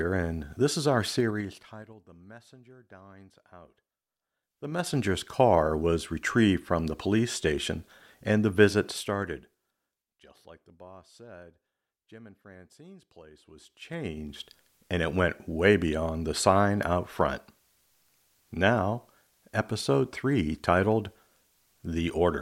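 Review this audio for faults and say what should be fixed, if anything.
There's zipper noise on four level moves in this speech, each one going in 3 dB jumps with a little click per step: 1.15 to 2.01 s, dropping about 25 dB right after "and this is our"; 4.40 to 4.99 s, back up about 25 dB; 8.83 to 10.20 s, down again after "police station and the"; and 13.40 to 14.42 s, up just before "and it went way". The steps tick along at roughly 7 to 15 a second, so you hear a ratchety zipping. To fix it, ramp the gain sample by sample instead of stepping it.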